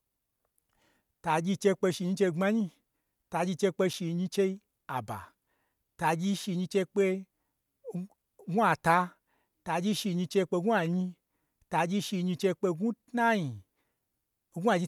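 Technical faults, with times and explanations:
3.93 s, block of digital silence: right after "chei kpe" the speech cuts out for about 5.8 ms, a tick likely from an unfilled buffer, which fits a 256-sample block.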